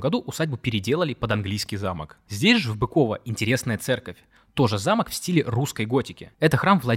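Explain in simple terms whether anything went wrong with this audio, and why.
From 1.45 to 2.72 s, the speech slows by about 6% and drops a semitone, then snaps back. This is a drift correction step, likely from clock-matching software.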